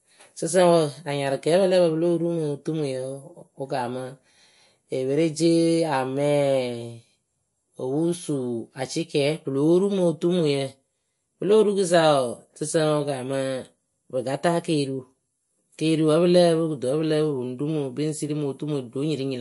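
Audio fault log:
Throughout, MP3 compression. The speech has a watery, swirling quality, and nothing is present above 11.3 kHz. Short of bits, likely near 48 kbps, the encoder cut the treble at a fixed point. It also dropped weak frequency lines, which flicker from frame to frame.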